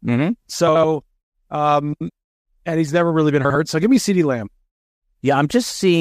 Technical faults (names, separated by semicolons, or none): frames out of order